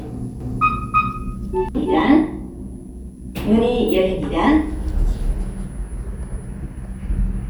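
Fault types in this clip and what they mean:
Doubled audio track: from about 0.4 s to 2.0 s every sound is followed by an identical, full-band copy around a third of a second later, about as loud as the original, with no decay, and it cuts in and out abruptly; likely a second capture path or misaligned edit.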